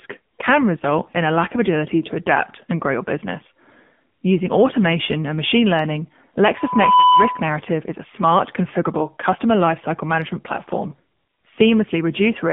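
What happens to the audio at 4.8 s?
From 4.78 to 4.86 s you get AMR bit errors: flipped bits in the weakly protected parts of about three 20 ms frames misplace the excitation pulses, so the voice turns briefly gargly and scratchy while its pitch and level hold. Underneath, the AMR narrowband mobile codec runs throughout, squeezing everything into 150 Hz to 3.5 kHz with a buzzy, synthetic edge that points to a low-rate mode around 7.4 kbps.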